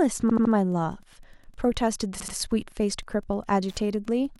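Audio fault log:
throughout: Wi-Fi interference, a faint tick every 102.4 ms, roughly 40 dB below the speech, as a nearby radio's beacon bursts are rectified by the audio circuit.
0.29–0.53 s and 2.20–2.35 s: repeated frames, a 78.4 ms block (consistent with three frames) replayed three then two extra times. This causes a stutter, and adds 235 ms and 157 ms.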